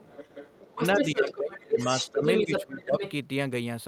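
A second voice sits under the speech from 0.0 to 1.07 s, roughly 10 dB down, and returns briefly at 1.28 to 1.37 s (fainter, about 15 dB down), from 1.55 to 2.64 s at about the same level as the speech, and from 2.8 to 3.12 s, roughly 10 dB down. This is the other side's voice leaking through, likely loudspeaker echo the echo canceller failed to remove. Overlapping it, the main speech dips sharply from 0.67 to 1.78 s, by up to roughly 25 dB, then again at 2.12 to 2.23 s and 2.45 to 3.02 s, by roughly 20 and 15 dB. That is speech suppressed in double talk, likely the canceller turning everything down while both sides spoke.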